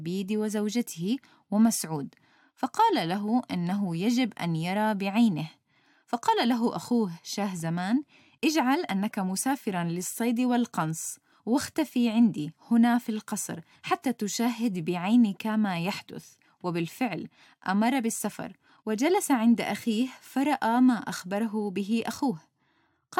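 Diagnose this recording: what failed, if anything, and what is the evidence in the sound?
Listening to the recording, nothing in the sound stood out as pointing to a failure at any stage of the chain.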